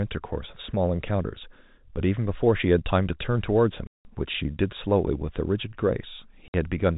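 At 3.87 s the speech drops out for 180 ms, and again at 6.48 s for 60 ms: packet loss filled with silence. Both gaps fit whole 30 ms packets missing, replaced by digital silence, so each hole has abrupt edges within the band-limited telephone-style G.711 sound.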